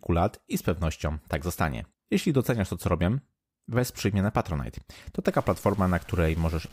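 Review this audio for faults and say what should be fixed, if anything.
From 5.32 s to the end, the speech picks up distortion, and the gaps between syllables fill with a gritty noise floor instead of falling silent. This is most likely a stuck bit: one data bit held at 0 or 1, worth around -45 dBFS, so about half the samples are offset by that amount. On a waveform, quiet stretches sit on small square steps instead of reaching zero. A spectrogram shows broadband hash across all frequencies that begins abruptly at 5.32 s. Checking the converter wiring and data lines, and monitoring silent passages for a raised floor, would catch this before recording.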